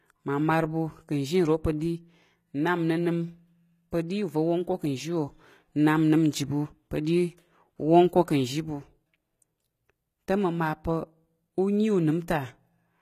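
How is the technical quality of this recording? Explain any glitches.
The quality is limited by plain, audible codec damage across the whole clip. The speech likely passed through HE-AAC compression, at a bitrate that sounds close to 20 kbps. The treble is rebuilt from copied lower bands, so harmonics misalign and s sounds turn gritty. Nothing is heard above 14.9 kHz.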